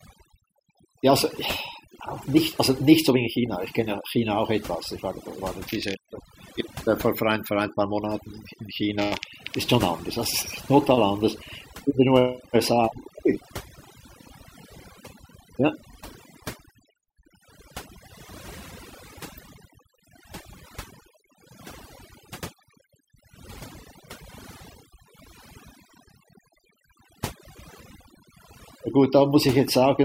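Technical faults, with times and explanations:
Throughout: overdone noise removal. Between phrases the background drops to an unnatural near silence dotted with faint twinkling specks, and the speech itself has its softer edges hollowed out. A noise reduction stage has been pushed too hard here: it cuts individual frequency bands deeply whenever they sit close to its noise estimate, so the remnants of noise flicker in and out while quiet detail in the speech is stripped along with it.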